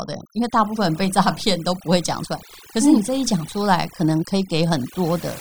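Throughout the speech, overdone noise removal is at work: a noise reducer set far too aggressively cuts individual frequency bands whenever they sit close to its noise estimate, taking softer speech detail with them. Pauses collapse into near silence dotted with twinkling specks.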